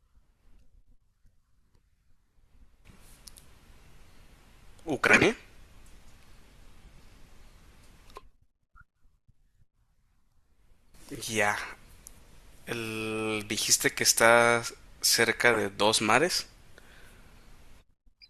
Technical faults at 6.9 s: corrupt frame decoded

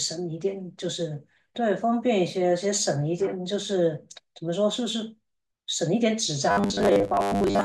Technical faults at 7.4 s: robotic sound from repeated short buffers

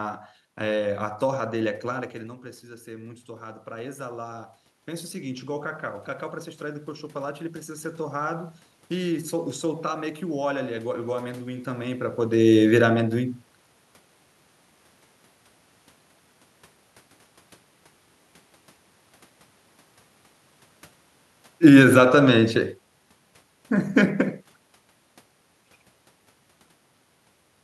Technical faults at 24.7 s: none

